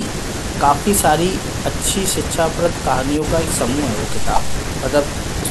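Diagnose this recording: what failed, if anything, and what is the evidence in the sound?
No fault can be heard.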